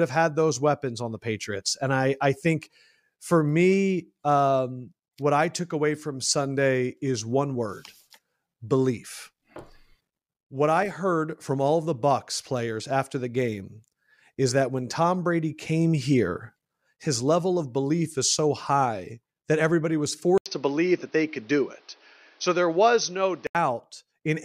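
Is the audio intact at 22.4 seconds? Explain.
No. At 22.4 seconds the sound is dull and narrow. From 20.38 to 23.55 s, just after "high that everybody was", the input likely switched to a poorer device. An 80 ms gap marks the switch. The new device passes nothing above 6.2 kHz, so sibilants and air vanish and the tone turns boxy. A fresh noise floor sits roughly 35 dB below the speech. Loudness stays about the same.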